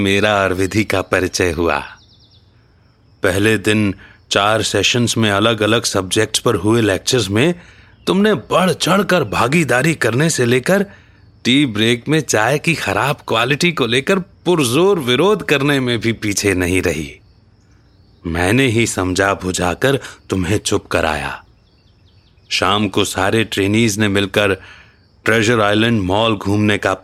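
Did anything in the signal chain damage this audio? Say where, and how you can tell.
Yes. The damage is at the sample-rate conversion stage, in a resampler restarted on every block. Throughout the speech there is a regular tick at 20 Hz. It rides on the signal and vanishes in the pauses. That rate means a 50 ms block. The converter processed each block alone, so its edges had no real neighbouring samples. Each seam carries a small error, and the errors repeat as regular ticks. The conversion is consistent with a 44.1 kHz to 48 kHz change.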